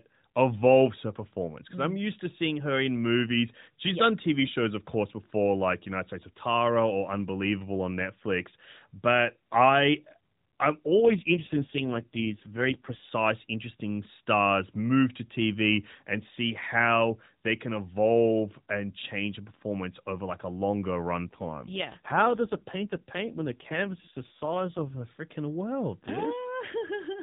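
Speech over an AMR narrowband mobile link with light codec coloration and nothing above 4 kHz. It has two AMR rate drops: from 10.98 to 13.10 s, after "I I'm" and before "interesting stars move to", and from 21.23 to 25.05 s, before "freaking world". Each time the voice turns buzzier and more synthetic, which fits a switch from the 12.2 kbps mode down to 4.75 kbps. Unlike packet loss, there is no gap, and unlike a bandwidth switch, the band stays the same.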